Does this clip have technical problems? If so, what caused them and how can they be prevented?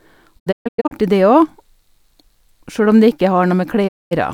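Yes. The speech has digital broadcast dropout twice. From 0.38 to 0.93 s the sound mutes in several short holes, about 350 ms lost in total. The longest hole is 128 ms, and each cut fades over 20 ms. From 3.87 to 4.13 s a second mute removes about 220 ms. The receiver lost good frames and muted until valid ones returned, which fits 32 ms frames. To prevent it, improve reception with a better antenna or stronger signal.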